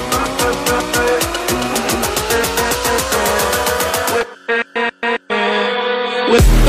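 From 1.75 to 2.05 s, frames out of order: two neighbouring 139 ms blocks were decoded swapped, producing a garbled flutter.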